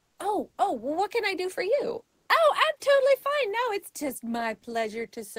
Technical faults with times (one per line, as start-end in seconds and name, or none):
0.00-0.19 comfort noise in place of the background
2.07-2.29 comfort noise in place of the background